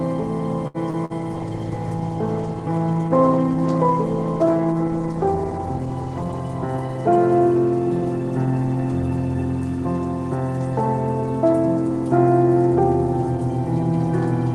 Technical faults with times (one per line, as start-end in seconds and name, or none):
0.67-0.77 short stall from a late packet
0.90-1.13 short concealed packet loss
1.36-6.49 call bitrate drop
6.48-7.39 jitter buffer speed-up